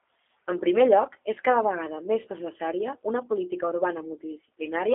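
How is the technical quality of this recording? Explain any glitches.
The technical quality is limited, with one problem throughout: the whole clip has been through the G.729 codec. This low-rate telephony coder rebuilds the speech from a vocal tract filter, a pitch estimate and a few pulses per frame rather than keeping the waveform, and the roughness points to about 8 kbit/s. The result sounds noticeably rough and synthetic, with a buzzy edge on the speech. The band is also squeezed to roughly 250 Hz to 3.6 kHz, so it's thin and boxy with no low end or air.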